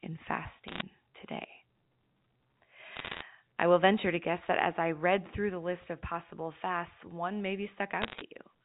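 Sharp ticks and brief crackle break over the speech at 0.68 to 0.82 s, 2.96 to 3.22 s just before "I will venture to", and 8.02 to 8.21 s after "of possible fasts one". These are bit errors on a digital phone line, flipped bits corrupting single samples of the G.711 A-law stream at roughly 1.5, 1.0 and 0.7 percent in turn.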